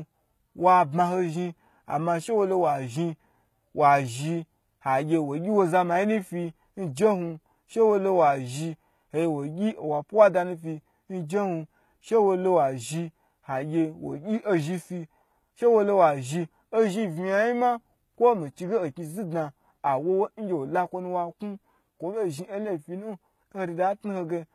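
HE-AAC compression, likely the cause, runs through the whole speech clip, and its damage is plainly audible. The upper spectrum was not carried directly: only the lower band was coded, and the treble was regenerated by copying lower bands upward and shaping them with a coarse envelope, consistent with a 20 kbps stream. Because that rebuilt top end is not the original, harmonics fail to line up across the crossover, and s sounds come out gritty, metallic or lispy.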